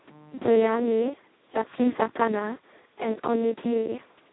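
Speech heard through the Speex codec at what sounds like a very low bitrate, near 2 kbps: hoarse, robotic CELP buzz throughout, with nothing above about 3.9 kHz, unlike plain band-limiting.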